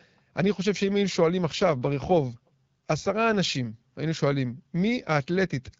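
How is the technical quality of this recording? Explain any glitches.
The recording has one glitch, set against the light coding damage of an AMR-WB (HD Voice) call. From 1.48 to 3.38 s there is an AMR rate drop. A weak radio link made the network push the codec to a lower rate, which sounds like a fall from about 12.65 to 8.85 kbit/s, spending bits on error protection. The speech turns rougher and more synthetic, with no gap and no change in bandwidth, until the rate recovers.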